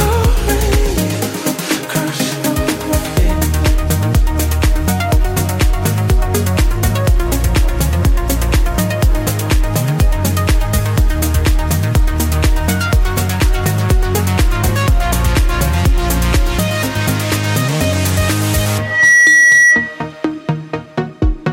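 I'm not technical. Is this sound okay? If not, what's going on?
No. A loudspeaker feedback squeal starts at 18.79 s. A 1.9 kHz tone swells within a fraction of a second and screams until 20.05 s, because the microphone was picking up its own loudspeaker.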